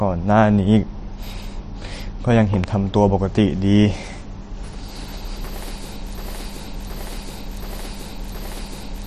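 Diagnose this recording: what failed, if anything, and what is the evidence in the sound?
A loud pop sits at 2.64 to 2.66 s. It is a single sharp transient, roughly 15 dB above the surrounding speech, and the speech carries on underneath it without a gap. That points to the analogue wiring or the driver rather than the codec. The likely cause is a voltage step from a plug, a switch contact or static being added to the signal, which the downstream circuitry shaped into one brief thump.

From 6.18 s to the end, the audio falls into a broken-record loop. One 0.72 s fragment plays back to back, four times over, identically each time. New speech never resumes, so whatever should have followed 6.18 s is lost. This points to the buffer or playback stage. The likely cause is that the player or stream stalled and kept re-sending the last block it held until the recording stopped.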